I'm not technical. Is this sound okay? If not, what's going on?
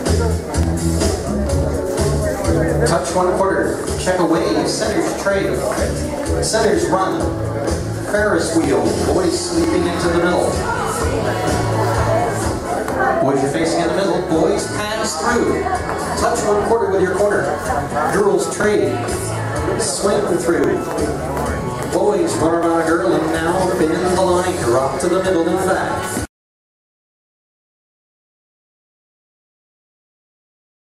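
No. About once a second, from 0.63 s to 30.6 s, there is a small tick, around 30 in all. These are periodic USB or driver dropouts: something in the computer briefly stalled the audio connection at a fixed interval, and each time a tiny slice of sound, around 2 ms, was skipped. Unlike random clicks from a damaged recording, these come at a steady one-second beat, and they are heard only where there is sound.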